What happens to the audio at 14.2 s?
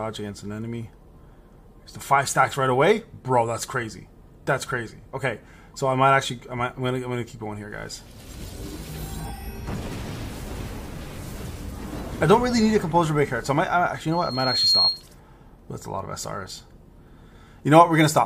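A piercing 4.2 kHz tone swells out of the audio over about half a second, reaching roughly 5 dB above the signal: loudspeaker feedback squeal, from 14.11 to 15.03 s. The microphone picked up its own loudspeaker, and at that frequency the loop gain exceeded one, so the tone fed itself.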